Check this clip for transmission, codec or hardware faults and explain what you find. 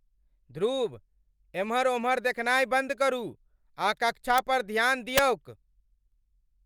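Integer overflow corrupts two loud peaks of this speech: at 4.38 s, between "आ कक्षा" and "पर ध्यान", and at 5.18 s, just after "आ कक्षा पर ध्यान", driven about 3 dB over. Samples exceeding full scale wrap to the opposite sign rather than flattening, producing violent cracks far harsher than clipping's flat-topped distortion.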